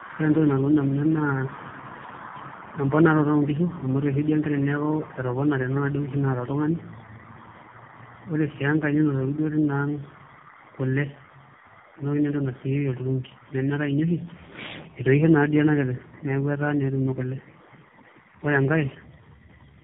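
Rough, muffled, warbly speech runs throughout, with nothing above 3.8 kHz. This is tandem speech coding, which points to three narrowband codecs in series, each re-encoding the previous codec's damage.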